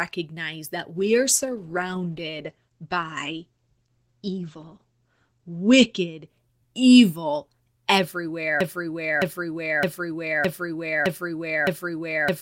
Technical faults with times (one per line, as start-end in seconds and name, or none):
0.96-6.33 call bitrate drop
8.61-12.42 broken-record loop